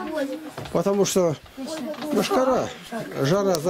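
Nothing stood out on listening to this clip.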